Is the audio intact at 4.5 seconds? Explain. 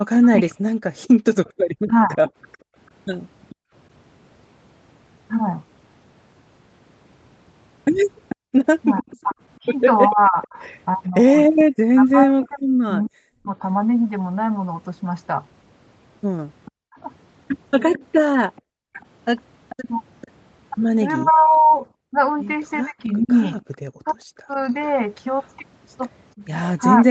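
Yes, at 4.5 seconds the speech is intact, with no dropout, glitch or other fault at that moment.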